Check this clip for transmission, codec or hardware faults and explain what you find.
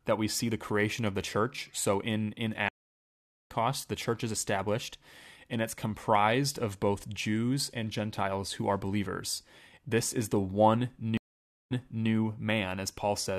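Two stream reconnects break up this speech. At 2.69 to 3.50 s the audio drops out for about 0.81 s, then resumes roughly a second further on. At 11.17 to 12.09 s a 0.53 s gap ends with playback jumping back 0.38 s. Both times the connection failed, the player sat silent, then reconnected and restarted its decoder mid-stream, landing at a different point.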